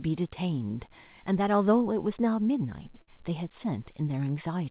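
A speech recording heard through a narrowband call path, with nothing above 4 kHz, as G.711 would give. At 3.02 s there is a burst of packet loss lasting to 3.09 s. The receiver stretches the last sound into a fading fill. Speech then resumes further on, with about 60 ms skipped.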